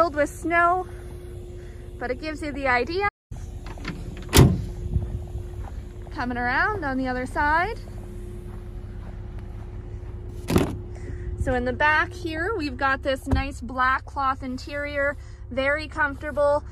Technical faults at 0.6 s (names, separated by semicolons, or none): none